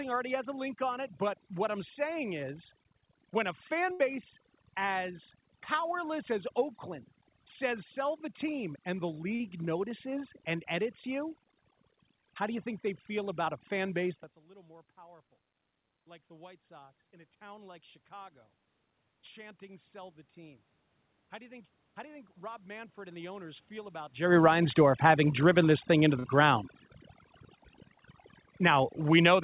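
Overdone noise removal runs through the whole clip. The suppressor was set so aggressively that any frequency band sitting near its noise estimate is pushed far down or switched off. The room background therefore breaks into twinkling, warbling specks instead of a steady hiss, and the quieter parts of the speech are carved away along with it. Above this processing, nothing reaches past 4 kHz, which fits a narrowband call codec.

A burst of packet loss hits at 3.92 to 4.01 s, just after "saying is when a". About 73 ms of audio had to be invented to cover roughly 80 ms that never arrived in time. The receiver stretched the last sound and let it fade across the gap, producing a held buzz or fading hiss, and then the speech jumps ahead with that stretch missing.

Short concealed packet loss occurs at 9.35 to 9.42 s and again at 26.20 to 26.26 s, the second right after "driven this thing into". 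Each time about 40 ms failed to reach the decoder, and the receiver filled it by extending the preceding sound, as pitch if voiced or shaped noise if not, before crossfading back. Each loss is heard as a brief smear or wobble, and a short consonant can disappear.

Automatic gain rising appears twice. From 16.27 to 18.40 s, after "little more powerful like", the input had dropped by about 23 dB as the talker moved, and the gain control raised its gain by about 4 dB, recovering only a small part of that loss. From 21.33 to 24.02 s it climbs by about 5 dB. In both cases voice and background swell together gradually over two seconds or more.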